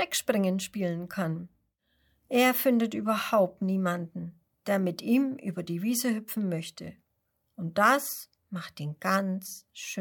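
No technical faults can be heard anywhere in the recording; the signal stays steady and continuous throughout.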